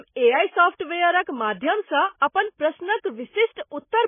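From start to finish the speech is cut off sharply above about 3.5 kHz, so sibilants lose their edge and the sound turns dull. Underneath, there is a heavy watery, swirling texture, with faint components flickering in and out. The likely cause is MP3 compression at a very low bitrate, which fits roughly 16 kbps. Short of bits, the encoder discards the treble and zeroes weak frequency lines frame by frame, smearing consonant attacks.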